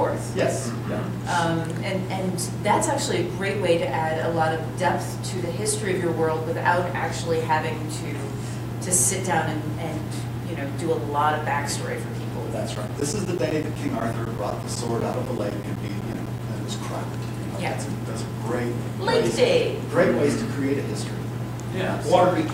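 From 12.75 s to 16.39 s the audio breaks up with periodic USB or driver dropouts. Regular ticks arrive every 0.125 s. Each one is roughly 10 ms of silence where a blocked driver dropped samples.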